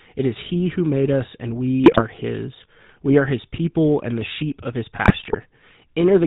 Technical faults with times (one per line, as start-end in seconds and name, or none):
0.00-6.27 GSM full-rate codec
1.84-2.02 GSM bit errors
5.02-5.38 GSM bit errors